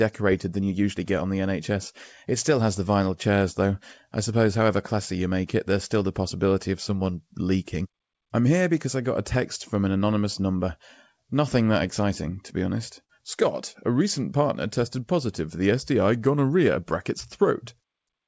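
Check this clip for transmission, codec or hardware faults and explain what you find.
One transmission fault stands out: a burst of packet loss from 13.04 to 13.19 s, just after "exciting to be honest". The receiver stretches the last sound briefly and turns it down as it goes, then speech resumes with a slice missing. That concealed fade, rather than abrupt silence, separates it from a plain dropout. The band stops at 8 kHz, which fits a G.722 call codec at 64 kbps.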